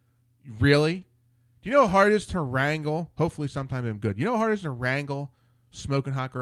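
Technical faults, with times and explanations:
0.99–1.03 s, short concealed packet loss: about 20 ms of the speech failed to arrive in time, and the receiver patched roughly 17 ms of it by extending the preceding sound, continuing its pitch where voiced or shaping noise where not, before crossfading back into real audio. The result is a brief smear or wobble rather than a clean dropout. Unlike a hard gap, nothing goes silent, though a very short consonant here could be swallowed.
1.01–1.03 s, lost packet rebuilt from error correction: a 20 ms stretch, which fits a single lost packet, was recovered from the low-bitrate backup copy carried in the following packet, as Opus in-band forward error correction allows. It therefore plays without a hole, but that frame sounds coarser and noisier than its neighbours. What sets it apart from concealment is that this is a degraded version of the actual audio, not an invented continuation of the previous sound.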